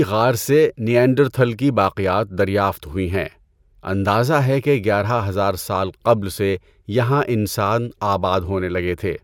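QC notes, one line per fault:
Nothing to flag here; the speech comes through without any faults.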